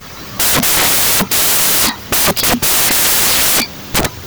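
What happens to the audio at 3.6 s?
At 3.6 s the reader is still assembling each sample from the wrong bytes, a fault that runs through the whole clip rather than starting there. Because the bytes are misaligned or in swapped order, the rapidly fluctuating low-order bits land in the most significant position, so each value is mostly garbage. The speech comes out as loud, harsh noise, close to white on the louder sounds.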